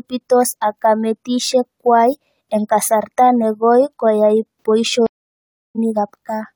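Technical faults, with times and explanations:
5.07 to 5.79 s, stream reconnect: The speech cuts to silence for 0.66 s. It then resumes slightly later, skipping roughly 50 ms. The connection broke, and the player reconnected and restarted its decoder mid-stream. The first instant back is muted or fades in.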